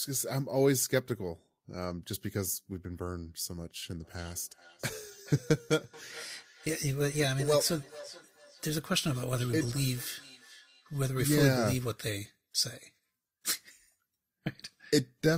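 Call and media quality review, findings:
Feedback echo between two devices, 4.03–11.08 s. Speech returns at roughly 0.4 s intervals, peaking about 21 dB below the direct speech. Probable component: second endpoint in the same room. Its loudspeaker output re-enters the first device's microphone. Each device's echo canceller removes only its own playback, so this acoustic loop passes through uncancelled.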